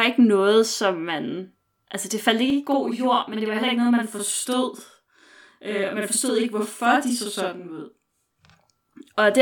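From 2.50 s to 8.50 s the speech sounds doubled, with a distinct slap echo trailing each sound by about 46 ms at equal level. This is channel delay (doubling): one channel runs late, which fits a 2048-sample buffer, and summing to mono exposes the late copy.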